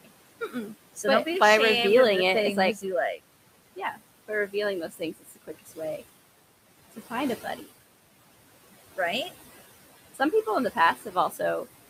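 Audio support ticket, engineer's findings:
Noise suppressor artifacts, whole clip. Background sinks between phrases and swells back under the voice. Suppressor pulling steady noise down by about 17 dB, band by band, frame by frame. Room noise itself sits about 17 dB under speech. The pumping comes from processing, not the room.

Speech cut by the noise suppressor at 0.04–1.26 s, 2.75–3.19 s, 3.76–6.02 s, 6.92–7.64 s and 10.75–11.66 s. Soft consonants and word tails swallowed, dipping up to about 16 dB (about 12, 13 and 9 dB in the second, fourth and fifth spans). Suppressor misreading quiet speech as noise. Roughly 0.1–0.2 s lost in most spans, well over half a second in the third. Partial fading, not hard silence, so not a transmission dropout.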